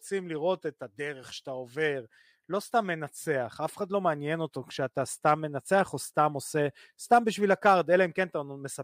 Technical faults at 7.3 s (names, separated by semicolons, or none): none